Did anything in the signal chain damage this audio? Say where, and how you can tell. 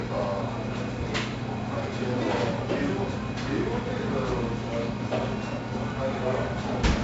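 Yes, at the codec stage. 4-bit ADPCM compression runs through the whole clip. A gritty hiss rides every loud sound and rises and falls with its level. Attacks smear because the step size lags. Nothing is heard above 7.7 kHz, which points to a 64 kbps stream.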